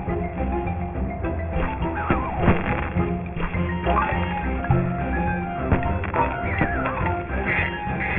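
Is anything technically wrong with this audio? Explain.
Yes. Aliasing runs through the whole clip. The audio was resampled to a much lower rate, which fits a drop to 6 kHz, without an anti-alias filter. Content above the 3 kHz fold point mirrors back as fairly loud, gritty, metallic tones at unrelated pitches. Simple band-limiting would only sound dull, not add these false tones.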